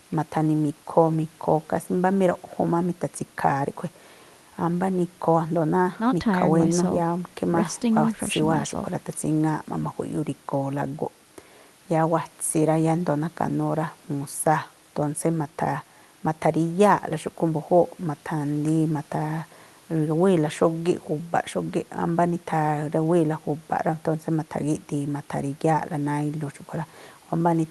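This speech clip has nothing technically wrong with it; it sounds like it went over an ordinary call link, with the top end tapering off around 12 kHz, and that's just how such a link normally sounds.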